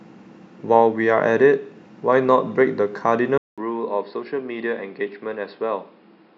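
Speech that goes dull and boxy at 3.38 s, after a 0.2 s gap, and stays that way to the end: nothing above 5.2 kHz, a level a few dB lower, and a new faint noise floor. The input likely switched to a poorer device.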